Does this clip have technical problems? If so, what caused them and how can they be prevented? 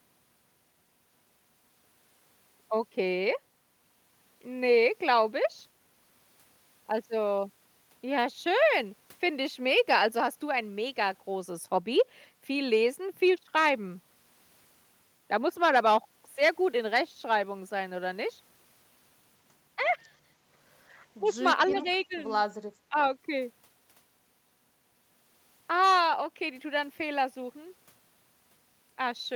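Yes. Echo leak, 21.68 to 21.79 s: a far-end echo canceller likely left residual loudspeaker pickup, returning a faint copy about 20 dB down, delayed 327 ms. Prevention: use a headset, or tune the canceller to converge on that path delay.

Speech suppressed in double talk, at 21.70 to 21.86 s, 22.08 to 22.15 s and 22.89 to 22.98 s: the canceller likely mistook overlapping talk for echo and attenuated it, causing dips of about 5, 10 and 15 dB. Prevention: use a canceller with better double-talk detection and milder suppression.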